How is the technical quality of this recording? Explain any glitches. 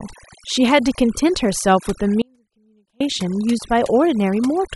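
Technical quality is poor: two faults stand out.

Overdone noise removal runs through the whole speech clip. An over-aggressive noise reducer has pushed individual frequency bands down whenever they resemble its noise estimate. Quieter parts of the speech go with them, so the background drops and breaks up into twinkling specks.

An audio dropout to a faint residue occurs from 2.22 to 3.00 s. The signal path was likely interrupted while the chain after it stayed live. The speech cuts out abruptly for about 0.79 s, leaving only a faint trace roughly 40 dB below normal level, then returns just as suddenly.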